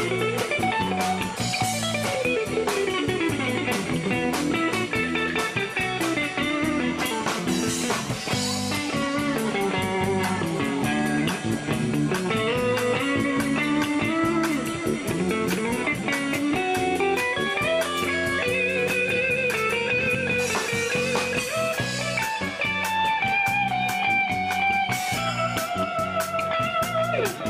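No technical faults are audible.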